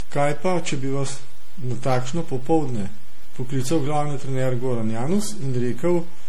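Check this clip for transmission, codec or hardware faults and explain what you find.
Two faults run through the whole speech clip: a DC offset and generation loss.

DC offset, from start to finish: nothing in the sound gives it away, but the waveform sits displaced from zero by a constant amount. That eats into headroom on one side and shows as steady energy at the bottom of the spectrum.

Generation loss, throughout: the speech sounds swirly, hollow and smeared, with softened consonant attacks and a watery haze worse than one lossy pass would leave. This is likely caused by repeated decoding and re-encoding, something like seven passes, which fits a 64 kbit/s MP3 chain. Each pass quantises on a shifted frame grid, so noise and spectral gaps pile up.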